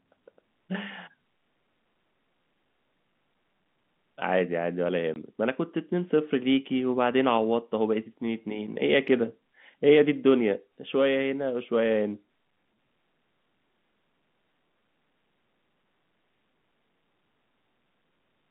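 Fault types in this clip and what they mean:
Packet loss filled with silence: from 5.14 to 5.16 s the speech cuts out for 20 ms, which fits one lost 20 ms packet. The hole is dead silence with hard edges. Concealment would repeat or smooth over the gap instead.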